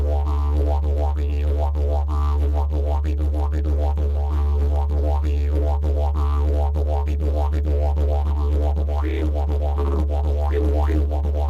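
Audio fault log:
No faults found in the clip.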